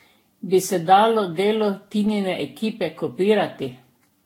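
Throughout, the speech sounds swirly, hollow and smeared, with blurred attacks. This is likely generation loss from about ten re-encodes. The spectrogram shows speckled holes and nothing above 16.6 kHz.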